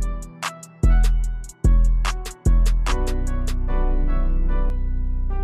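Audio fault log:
2.26–4.70 s, doubled audio track: a second full-band copy of the sound sits on top, trailing by roughly 0.7 s and about as loud as the original. It has no reverb tail or room colouring, so it sounds like a clean duplicate rather than an echo, and it cuts in and out abruptly at both ends. That's likely from a second, slower capture path or an edit leaving two out-of-step copies mixed together.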